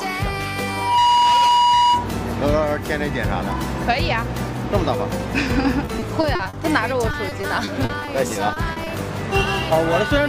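From 0.67 s to 2.15 s a loudspeaker feedback squeal rings out: a microphone is hearing the speaker it drives, and at 965 Hz the loop gain tops unity, so that one pitch feeds on itself. It swells within a fraction of a second and sits a few decibels above the programme. What marks it as feedback rather than an added test tone or electrical whine is that growth from nothing into a sustained howl, and its end once the loop breaks.

Repeated packet loss, with its robotic sound, follows from 5.85 s to 6.55 s and again from 7.11 s to 8.88 s. Lost or late packets leave a run of short holes, none longer than 40 ms, each patched by stretching the preceding sound. That gives a choppy, robotic stutter. Unlike a single dropout or clean silence, the holes arrive in close succession, and the concealment fills them with a buzzy repetition rather than leaving them empty.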